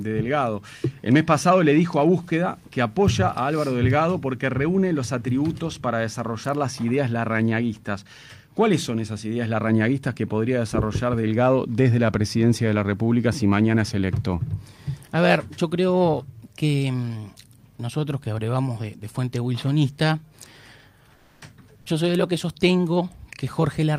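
From 21.15 to 21.41 s the sender likely switched to Opus discontinuous transmission, so the receiver filled those 260 ms with comfort noise in place of the background. The real ambience, about 35 dB below the loudest sound, turns into flat, featureless hiss about 4 dB quieter.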